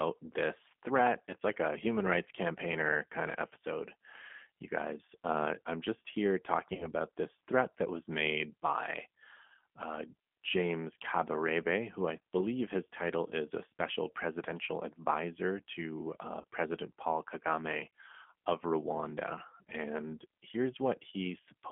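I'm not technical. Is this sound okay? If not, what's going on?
No, not quite. The whole recording has gone through the G.729 codec, a compressed format used for internet phone calls. It rebuilds the speech from a simplified model of the voice rather than sending the actual sound, and it drops everything above about 3.4 kHz. That's why the speech sounds thin, slightly rough and a bit synthetic throughout. You can still follow it easily, but the damage is plainly audible.

There are also two short hiccups from VoIP packet loss concealed by the speech codec, at 6.75 to 6.89 s and at 16.41 to 16.44 s. Each one sounds like a single lost packet, about 30 ms of audio that never arrived. The decoder filled the gap by guessing from the sound just before it, which gives a brief buzzy or smeared moment. At 6.75 s the wobble lasts a little longer, while the decoder settles back into normal sound.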